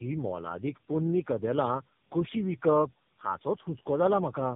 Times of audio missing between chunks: none

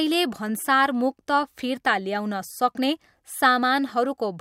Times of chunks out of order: 3.89

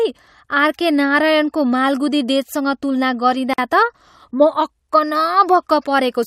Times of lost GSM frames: none

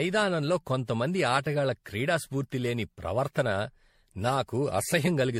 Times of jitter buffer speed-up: none

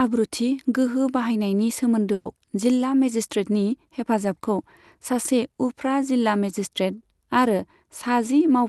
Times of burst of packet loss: 2.13-2.27

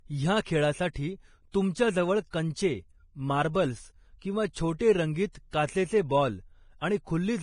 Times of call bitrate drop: none

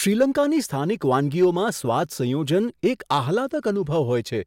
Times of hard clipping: 1.13-1.45, 2.87-3.17

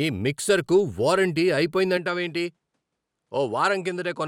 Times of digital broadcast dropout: none

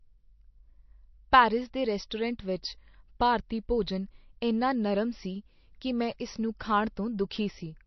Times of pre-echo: 2.10, 6.59

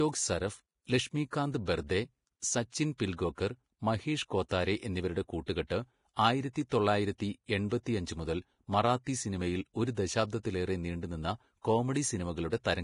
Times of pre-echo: 4.49-4.51

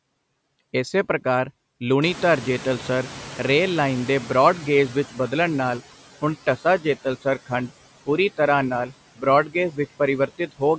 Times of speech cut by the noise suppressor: 9.46-9.55, 10.27-10.62

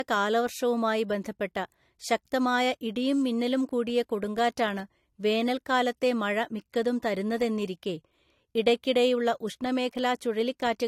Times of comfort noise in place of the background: none

